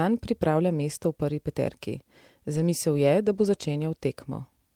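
At 2.55 to 2.61 s, and again at 3.43 to 3.45 s, the speech goes briefly rough and noisy without ever dropping out. Both are a lost packet rebuilt from error correction. The packets went missing, and the decoder filled in from the low-bitrate copies carried in the next packets. The first patch sounds like about 40 ms of rebuilt audio, which points to two lost packets, and the second sounds like a single 20 ms frame.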